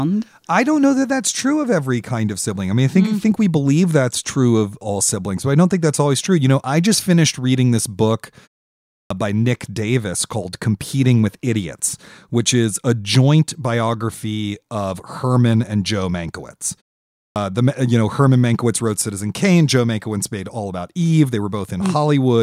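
At 1.47 s a single sharp tick cuts through the speech, a bright click spread across the whole spectrum that has nothing to do with what is being said and is gone instantly. This is a bit error spike: one sample had a single bit flipped somewhere in memory or on a digital link, so its value leapt by a power of two and then snapped straight back, producing that isolated impulse.

At 8.94 s, and again at 17.19 s, speech resumes abruptly out of silence with its opening sounds missing, as if the talker started mid-syllable. This is a clipped start after a pause. After silences of 0.55 s and 0.46 s respectively, the output device had gone to sleep and needed time to wake and lock again. That swallowed about 164 ms of the first sound at 8.94 s and about 168 ms at 17.19 s. The pauses themselves go quiet as the output is muted between phrases, and it is the return from that quiet that comes too late.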